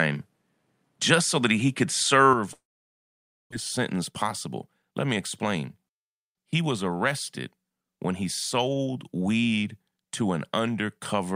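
Speech that opens dull and narrow: for the first 2.33 s there is nothing above 13 kHz, the level sits about 5 dB away from what follows, and a faint new noise floor lies roughly 50 dB under the speech. At 2.33 s the sound shifts to the fuller character with no gap in between. That pattern of bandwidth, level and noise changing together at one instant is most likely an input switched to a poorer device, the recording having started on a lesser microphone or headset path before moving to the better one. From 2.53 s to 3.53 s the audio breaks off. A brief smeared continuation of the last sound gives way to about 0.91 s of silence, and when speech returns at 3.53 s roughly 0.8 s of it is simply gone. This is likely a long network dropout: nothing arrived for that stretch, the receiver briefly stretched out what it had, and playback resumed with a delay shifted by something like 150 ms. Right after, from 3.77 s to 5.78 s, the speech runs hurried at about 108% of normal speed while the pitch stays unchanged. 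This is a jitter buffer speed-up: holding more audio than it wanted after the outage, the receiver trimmed many short pitch-period slices, around 150 ms in total, to pull the delay back down.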